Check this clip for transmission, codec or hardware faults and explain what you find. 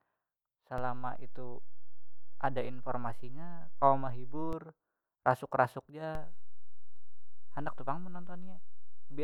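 There's a DC step fault, twice: the waveform's zero line jumps by about -29 dBFS at 0.78 s, drops back at 4.53 s, then jumps again at 6.15 s and holds to the end. Each jump is a low thump under the speech.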